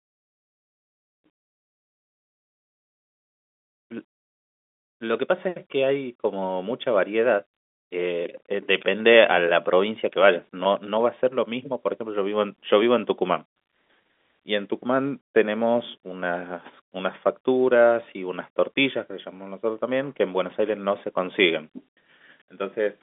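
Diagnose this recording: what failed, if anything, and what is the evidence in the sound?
Nothing failed; the telephone-band speech comes through intact.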